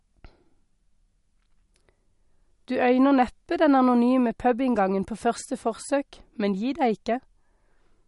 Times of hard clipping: none

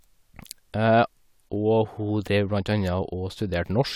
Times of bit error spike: none

